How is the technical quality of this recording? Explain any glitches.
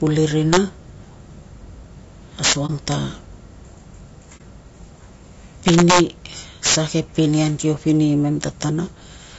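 The technical quality is poor: the speech has a coarse codec character from start to finish, with loud wrap-around cracks at five points and two brief dropouts.

Throughout, the speech sounds rough and grainy, with noise filling the gaps between harmonics and a thin, synthetic-sounding top band. The likely cause is low-delay AAC compression (AAC-ELD), whose short frames resolve pitch poorly; the damage fits a low bitrate around 32 kbps. A spectrogram would show smeared harmonics and a patchy upper band.

Integer overflow cracks occur at 0.53 to 0.57 s, 2.44 to 2.92 s, 5.68 to 6.00 s, 6.66 to 6.76 s and 8.43 to 8.62 s. Loud peaks exceeded the integer limit by about 2 to 14 dB and wrapped to the opposite sign instead of being clamped. On the waveform, peaks jump across the full range. They sound like violent cracks, worst at 2.44 s.

AAC frame loss with muting occurs at 2.66 to 2.70 s, inside the worst crack, and at 4.37 to 4.41 s. 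About 30 ms of spectrum was zeroed, which fits one lost frame. The overlapping windows fade the sound out and back in, so each gap is a brief dip. A spectrogram shows it as a narrow blank vertical stripe.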